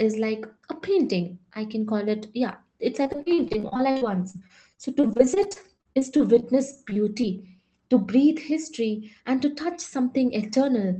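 Repeated packet loss with a robotic sound runs from 3.03 to 7.60 s in this speech recording, starting just after "call it yeah it's". Dozens of short gaps, the longest about 41 ms, were each covered by stretching out the preceding sound. The holes come in quick succession, so roughly a fifth of that stretch is synthetic fill. The result is choppy, robotic audio with small pieces missing. A jitter buffer speed-up follows from 9.13 to 9.67 s. The receiver had built up more delay than it wanted, so it cut out short pitch-period-sized slices, around 70 ms in total. The audio there plays at about 110% speed with the pitch unchanged and sounds briefly hurried. All of this sits on top of a call-codec path whose band limit near 8 kHz fits a low-bitrate Opus setting.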